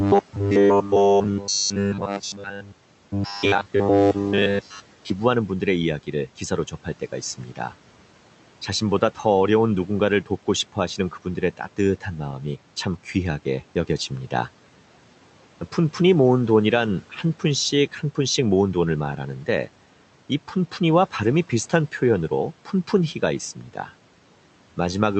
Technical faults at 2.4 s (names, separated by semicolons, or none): robotic sound from repeated short buffers; speech cut by the noise suppressor